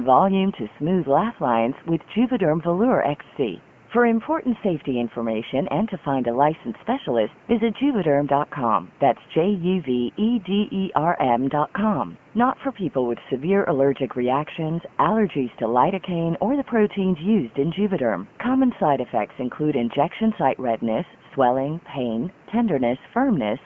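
Nothing stood out on listening to this speech.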